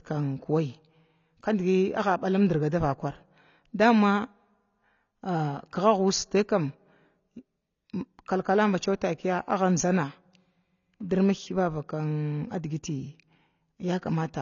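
A speech clip with AAC compression damage, plainly audible from start to end. Nothing sounds above 7 kHz, and the remaining band has a smeared, warbling texture with fizzy sibilants, which points to the codec likely running near 24 kbps and starving its frequency lines of bits. A plain low-pass filter would dull the top just as sharply but leave the remaining spectrum clean and steady. Here the swirling band shows lossy quantisation.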